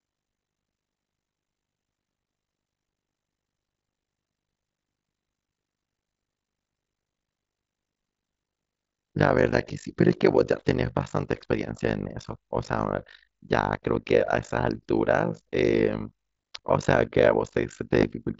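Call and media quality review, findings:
Call and media quality review, findings:

Overlap-add ripple, whole clip: fast rough flutter, tremolo around 50 Hz. Frame reassembly stage; windowed frames overlapped without constant-gain sum, so level swings by about 60 dB once per frame.

Concealed Bluetooth headset packet loss, 15.99 s: 15 ms gap, fits two lost frames. Receiver loops best-matching recent waveform; held buzzy tone, slight warble on resumption.

Concealed Bluetooth headset packet loss, 18.00–18.03 s: 22.5 ms, fits three frames. Longer filled run, held buzzy tone, warble where real audio returns. mSBC wideband link underneath carries the repeated segment.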